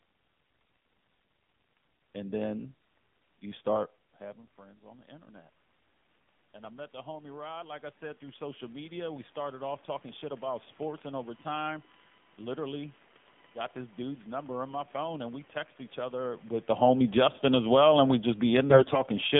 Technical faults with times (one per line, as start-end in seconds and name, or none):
0.00-19.39 AMR narrowband mobile codec
4.20-5.60 automatic gain rising
6.53-10.46 automatic gain rising
17.03-17.79 automatic gain falling
18.70-19.03 AMR bit errors